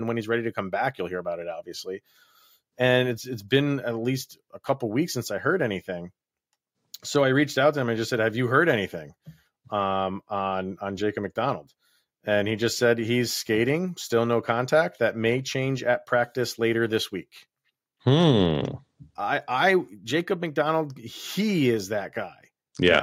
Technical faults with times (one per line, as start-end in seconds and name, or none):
none